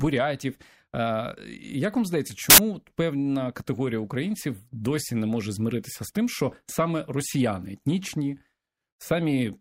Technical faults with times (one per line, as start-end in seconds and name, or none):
2.50-2.58 samples built from the wrong bytes